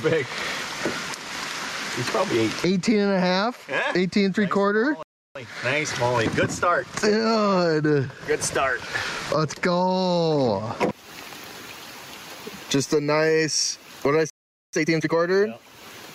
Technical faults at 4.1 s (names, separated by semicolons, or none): gain pumping